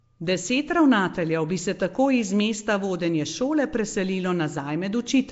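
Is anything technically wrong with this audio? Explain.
Yes. Nellymoser compression runs throughout the speech, likely from the Flash-era Asao codec at a rate fitting 32 kbps: blocks coded at two bits a sample leave weak bands empty and filled with noise, giving a rough, hissy, underwater smear, with nothing above 7.7 kHz.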